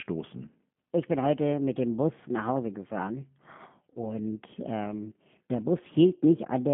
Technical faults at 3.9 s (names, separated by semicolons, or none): G.729 codec; VoIP packet loss concealed by the speech codec